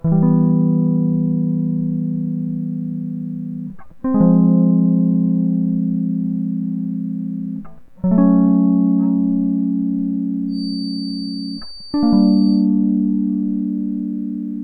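From 10.47 to 12.69 s, the loop between loudspeaker and microphone likely sits just at the edge of feedback, sustaining a single 4.6 kHz tone without building further. The result is a feedback whistle, thin and steady behind the music, roughly 20 dB down and swelling and fading slowly in level.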